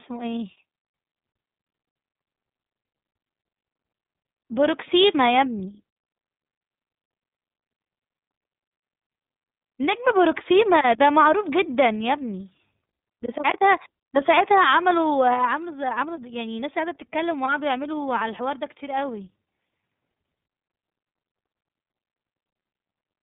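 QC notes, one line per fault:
Throughout, iLBC codec. The speech has no content above about 3.8 kHz and sounds plainly rough and synthetic. The codec codes each 30 ms frame's excitation on its own, and the character fits a rate near 13.33 kbps, so the damage is easy to hear.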